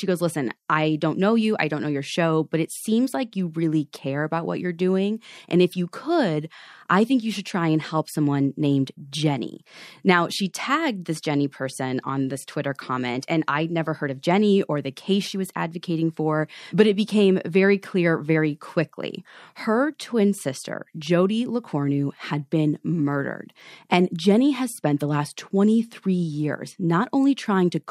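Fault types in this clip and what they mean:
No faults can be heard in this speech recording.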